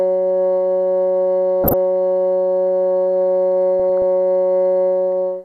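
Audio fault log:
1.64–1.74 s and 3.80–4.02 s, DAB burbling: brief bursts of noisy blips over the music. A small bit error rate, well under one percent, slips past error correction and corrupts the MP2 samples, putting short blips of noise into single sub-bands.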